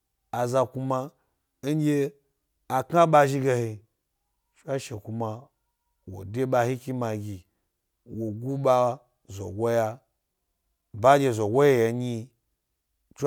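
No technical faults are audible.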